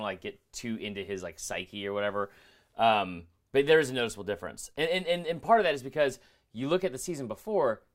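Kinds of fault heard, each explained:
Nothing stood out as a fault on listening to the speech.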